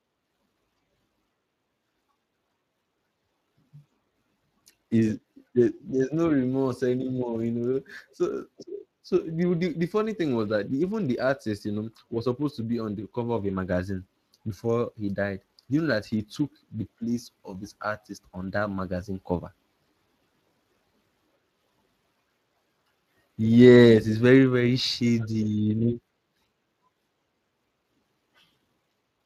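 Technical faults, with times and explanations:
Throughout, Speex codec: the speech went through Speex's CELP coder at a rate that sounds like roughly 22 kbps, too few bits to code the excitation finely. The result is plainly audible damage, a rough, grainy texture, with nothing above 15.3 kHz.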